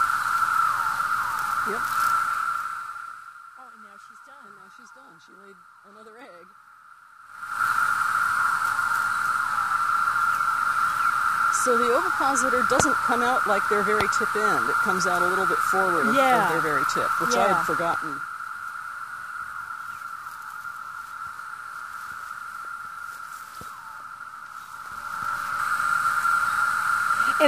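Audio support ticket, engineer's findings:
Zipper noise, 2.18–3.46 s: fast ticking riding on the sound as the level falls by roughly 25 dB. Gain applied in 1 dB jumps about 20 times a second, unsmoothed; each jump clicks. Probable component: gain or fader stage stepping per buffer.

Zipper noise, 7.21–7.64 s: coarser zipping on a rise of roughly 25 dB. Same stepped gain, 3 dB increments at about 20 per second, no ramp between steps.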